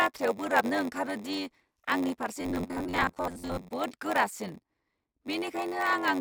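A processing stage in this speech recording writes shorter blocks than the next stage reads, consistent with a 512-sample read block, so zeros pad each block. This block size mismatch (padded) produces a steady 93.8 Hz buzz throughout and slows playback to 0.938 times normal speed without much pitch change. From 2.41 to 3.71 s the sound turns into a rigid metallic buzz at 93.8 Hz. This is likely robotic sound from repeated short buffers: new audio arrives too rarely, and most of it in that span is replaced by repeats of the last short buffer.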